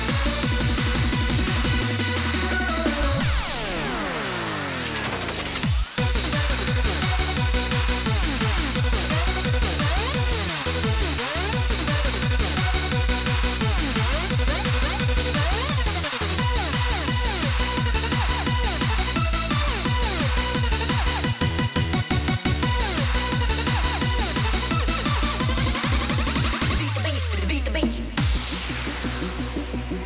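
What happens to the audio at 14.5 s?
Nothing goes wrong at 14.5 s: the audio plays through that moment without any dropout, click or other technical fault.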